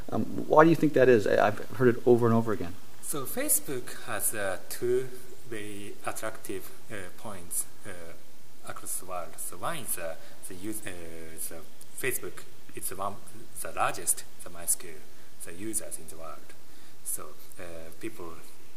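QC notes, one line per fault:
Throughout, DC offset: something upstream of the output has added a constant voltage, so the entire waveform rides about -29 dBFS away from zero. You can't hear the shift as a tone or a hum. It shows up as steady energy at 0 Hz at the very bottom of the spectrum, and it eats into headroom, so peaks on one side reach clipping sooner than they should.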